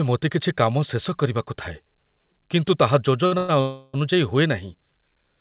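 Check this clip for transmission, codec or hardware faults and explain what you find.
Three delivery faults cluster between 3.26 and 3.96 s in the speech, all from packets arriving late rather than being lost. The call path itself is band-limited, with nothing above 4 kHz, which fits a G.711 A-law link at 64 kbps.

Short stall from a late packet, 3.26 to 3.34 s: a packet missed its playout time and the jitter buffer ran dry, so the receiver extended the last sound for about 55 ms until the packet turned up, then resumed from the same point. Nothing is lost. The stretched sound is audible as a brief held tone, and everything after it plays 55 ms later.

Call audio freeze, 3.38 to 3.51 s and 3.61 to 3.96 s: these gaps are likely caused by packets being held up in transit, which emptied the jitter buffer each time. The receiver carried the last sound forward as a fading buzzy continuation, for 110 ms and then 330 ms, without dropping to silence. 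Playback then picks up where it stopped, so no audio is missing. Instead, gaps totalling about 440 ms are inserted.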